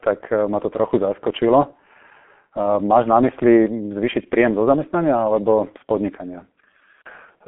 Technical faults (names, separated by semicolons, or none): G.723.1 codec